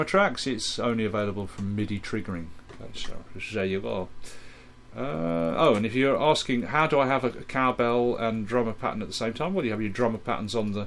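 A steady ticking runs through the whole recording, about 20 clicks per second, fast enough to merge into a rough buzz that rides on the sound whenever there is signal and falls away in quiet moments. The fault is a resampler restarted on every block. The audio was converted in separate 50 ms chunks, likely a halving from 48 kHz to 24 kHz, so at each chunk edge the converter lacked the true neighbouring samples, leaving a small error every 50 ms.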